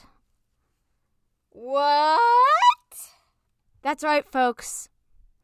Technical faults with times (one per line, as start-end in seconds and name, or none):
none